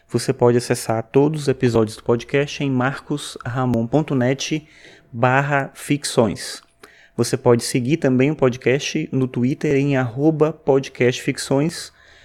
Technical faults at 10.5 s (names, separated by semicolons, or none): none